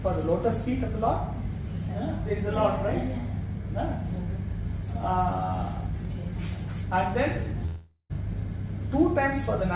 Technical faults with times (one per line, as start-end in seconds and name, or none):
7.66-8.12 long network dropout